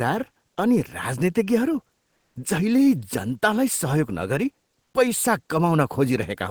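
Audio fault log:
2.15–2.35 s, comfort noise in place of the background: sending likely paused under Opus discontinuous transmission, so steady, featureless synthetic noise at the same level replaces the real background for 200 ms.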